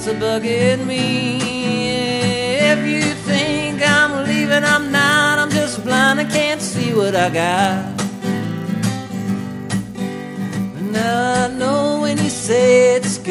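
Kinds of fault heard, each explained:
Resampler restarted on every block: From 4.28 s to 11.18 s, each 10 ms block was converted on its own, which fits a doubling from 24 kHz to 48 kHz, so every block edge carries a small error. Those edges repeat at 100 Hz and fuse into a steady buzz riding on the sound that falls away whenever the signal does. Unlike mains hum, it tracks the signal; unlike random dropout clicks, its spacing is perfectly regular.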